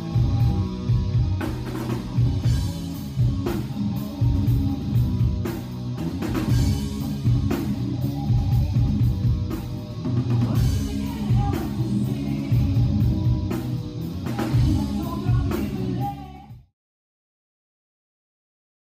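No technical faults are audible.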